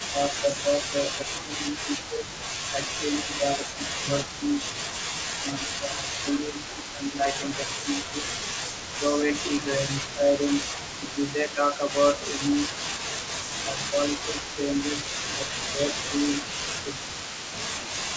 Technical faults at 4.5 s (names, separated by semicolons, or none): speech suppressed in double talk; echo leak